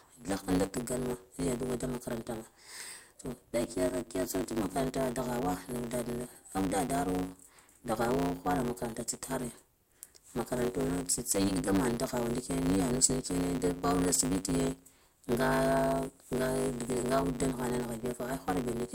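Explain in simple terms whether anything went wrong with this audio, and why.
Something did go wrong, from start to finish: a block size mismatch (truncated). One stage hands over chunks of speech, apparently 512 samples each, but the next stage reads less, so the tail of every chunk is thrown away. The regular cuts cause a steady buzz at 100 Hz, and the speech runs about 1.16 times too fast. Unlike a simple playback-speed error, the character of the voice stays the same.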